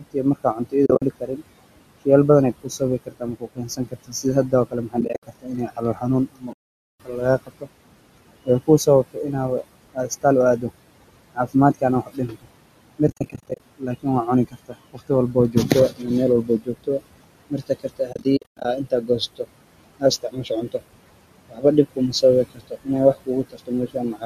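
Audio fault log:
Throughout: noise suppressor artifacts. The room noise, sitting about 16 dB below the speech, is pulled down by about 21 dB between phrases and swells back under them.
0.0–1.42 s, 2.63–7.68 s, 8.44–9.34 s, 9.94–10.65 s, 11.35–19.46 s, 19.99–20.82 s, 21.49–24.25 s: speech cut by the noise suppressor. The suppressor mistakes quiet parts of the speech for noise and dips them by up to about 22 dB. Soft consonants and word endings sound swallowed, most of all across the two long spans.
0.86–1.02 s, 5.01–5.23 s, 6.53–7.00 s, 13.08–13.60 s, 18.13–18.65 s: AAC frame loss with muting. Lost frames are decoded as silence, and the overlapping windows fade each hole in and out. At 6.53 s there is one solid 470 ms gap. The others are broken dropouts, with the longest about 100 ms near 18.1 s, which fits the 10 ms frames of the likely AAC-ELD stream.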